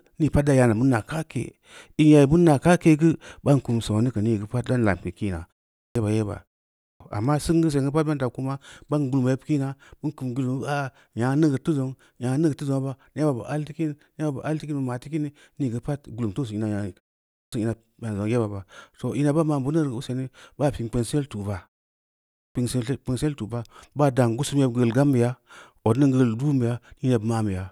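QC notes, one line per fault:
5.75 s, 6.80 s (before "amma singu"), 17.30 s, 22.34 s, clipped start after a pause: after silences of 0.31 to 0.74 s, the first 0.20 to 0.22 s of speech is missing. The output device dozes in each gap and is still waking when sound resumes, so onsets arrive abruptly.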